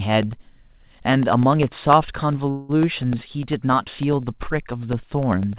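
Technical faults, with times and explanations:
0.13 to 5.58 s, periodic USB or driver dropouts: a blocked bus or driver drops a sliver of audio to silence every 0.1 s, heard as steady ticking through the speech. The waveform shows evenly spaced notches; the spectrogram shows thin vertical broadband lines.
2.5 to 2.79 s, call audio freeze: the last sound stretches into a fading buzz for about 190 ms, then resumes unbroken and later, likely from delayed packets emptying the jitter buffer. The spectrogram shows smeared horizontal bands below the call path's 4 kHz ceiling.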